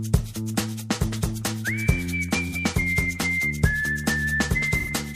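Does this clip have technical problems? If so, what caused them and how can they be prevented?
Yes, there's AAC frame loss with concealment: smeared patches at 2.48–2.54 s and 4.79–4.90 s, consistent with one and then two lost frames patched from the last good spectrum. Retransmission or forward error correction on the link would prevent it.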